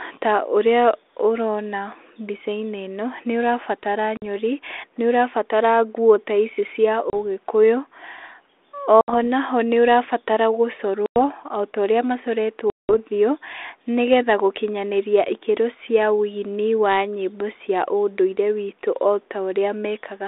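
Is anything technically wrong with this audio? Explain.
Yes. The speech has packet loss on an ADPCM call: dropouts at 4.17 s (after "ũrona mbicainĩ ĩno nĩũrabatara"), 7.10 s, 9.01 s (before "naho nĩũra batara"), 11.06 s and 12.70 s. They lose 50, 30, 70, 100 and 190 ms respectively, each long enough to suggest several packets going missing together. Each gap is filled with abrupt silence. Because the receiving decoder's adaptive predictor and step size no longer match the sender's, the speech comes back with some roughness, and it settles over the following tens of milliseconds. The G.726 coding itself, heard as 300 Hz to 3.6 kHz telephone band audio consistent with 32 kbit/s, shows only light codec damage.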